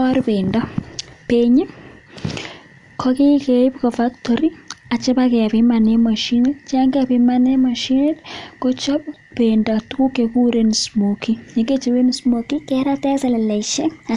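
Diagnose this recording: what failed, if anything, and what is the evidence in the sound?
Wrong sample rate at playback: from 12.14 s to the end, speech runs 1.09 times fast and about 1.5 semitones high, which fits 22 kHz material played at 24 kHz.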